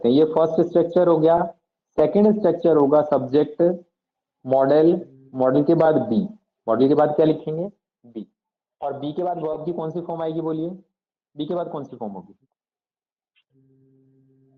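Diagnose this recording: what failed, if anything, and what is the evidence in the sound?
Repeated frames, at the codec or storage stage: short stutters at 1.37 s, 5.85 s and 9.53 s. The first two replay a 20 ms chunk once; the third replays a 10 ms chunk twice. Each adds 20 ms to the run time.

Zipper noise, in a gain stage: from 7.26 to 8.34 s the level drops by about 10 dB in audible 1 dB steps, around ten per second. There's no smoothing between steps, so each one ticks, giving a zippy texture that rides on the sound while the level falls.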